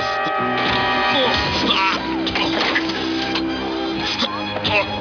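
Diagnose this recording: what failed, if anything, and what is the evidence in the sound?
Nothing in this one gives me anything to chase: the audio holds steady all the way along, with no sign of trouble at any stage from the wiring to the playback.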